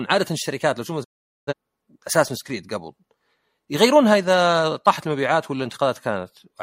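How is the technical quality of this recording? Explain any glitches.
The recording has one clear glitch, a digital broadcast dropout, from 1.03 s to 1.53 s. The speech fades out over about 20 ms and then goes completely silent for roughly half a second before it resumes. The receiver stopped getting usable frames, either because the signal was lost or because frames failed their checksum, so it muted until valid data returned. About 0.43 s of programme is gone, which fits roughly ten lost frames, and none of it is repeated afterward. On a waveform this shows as a brief taper into a flat line. On a spectrogram it is a clean vertical blank band across all frequencies, with the sound returning at 1.53 s.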